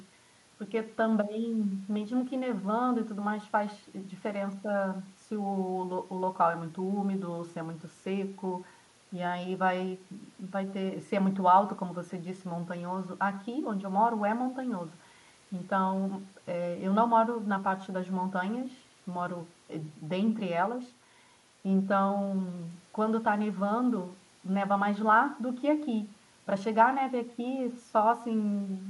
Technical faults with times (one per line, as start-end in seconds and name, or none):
0.00-28.89 echo with no canceller